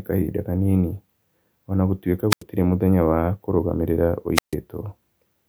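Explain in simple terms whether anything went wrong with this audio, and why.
The speech cuts out twice, because of a wireless microphone squelch dropout. The first comes at 2.3 to 2.43 s, right after "o na gũtuĩka", with sound going nearly silent for about 0.09 s before "mũthenya wa kũrũgamĩrĩra". The second is at 4.35 to 4.54 s, after "mũthenya wa kũrũgamĩrĩra", with a gap of about 0.14 s. Each time, the radio link from the microphone weakened. The receiver hissed briefly, then muted itself until the signal came back.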